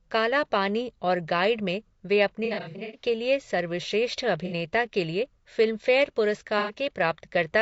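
Speech carries plainly audible low-delay AAC compression throughout: a rough, grainy voice with noise between harmonics, likely AAC-ELD at around 32 kbps, steady rather than patchy. AAC frame loss with concealment leaves smeared, phasey patches instead of clean silent gaps, scattered over 2.45–3.02 s with runs up to about a tenth of a second, then brief ones at 4.46–4.53 s and 6.59–6.73 s.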